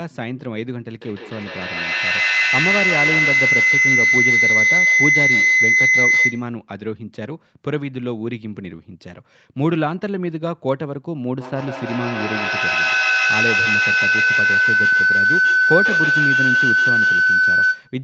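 Feedback howl runs from 1.01 to 6.57 s, then 11.4 to 18.02 s. The loop grows, ringing near 2 kHz, then 1.5 kHz. It reaches about 7 dB above the speech.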